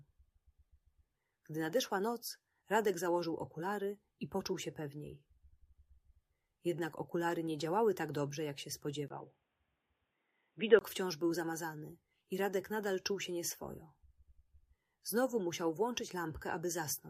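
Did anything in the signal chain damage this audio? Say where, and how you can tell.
Yes. From 9.08 s to 10.81 s the sound turns dull and boxy, with nothing above about 3.8 kHz. A gap of roughly 20 ms marks the change, the level shifts by around 5 dB, and a new, faint background noise appears well below the signal. The stage is the input device and its driver: the recording most likely switched to a poorer device, a different microphone or a headset's narrowband call profile, with its own bandwidth, tone and noise floor.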